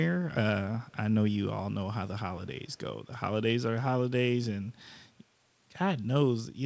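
Echo leak at 0.87 to 0.94 s and again at 2.7 to 2.78 s in this speech recording: a faint, delayed copy of the speech, lagging by about 223 ms and roughly 40 dB below it, surfaces briefly. It is likely caused by a far end playing the call on a loudspeaker whose echo canceller failed to remove everything its microphone caught, so the residue was sent back. The band-limited sound, with nothing above 8 kHz, comes from the call path itself.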